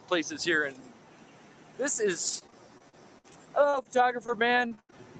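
From start to finish, a noise suppressor applied to music or sounds rides the level. Held tones and tails drop by around 10 dB, so the sound pumps and thins.

From 2.27 to 5.01 s, repeated packet loss makes the sound choppy and robotic. Each hole, the longest 92 ms, is patched by stretching the last sound.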